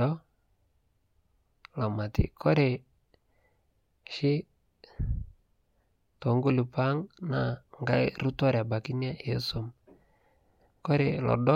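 No technical faults can be heard anywhere in the speech recording; the signal stays continuous and steady throughout.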